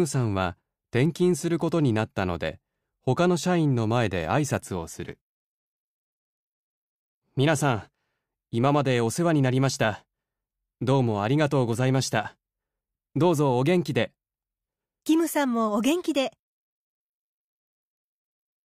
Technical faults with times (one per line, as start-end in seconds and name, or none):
none